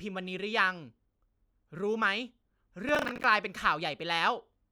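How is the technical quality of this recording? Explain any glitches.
The recording has one glitch, a burst of processor overload crackle from 2.89 to 3.24 s. The processor missed about ten deadlines for buffers of around 10 ms, and each miss replayed a scrap of old audio with hard edges, producing gritty tearing over the speech. Unlike a single dropout, it is a rapid run of small breaks that stops cleanly once the load eases.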